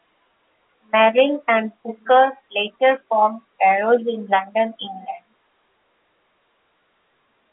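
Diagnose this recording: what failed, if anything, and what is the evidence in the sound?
Nothing failed in this recording.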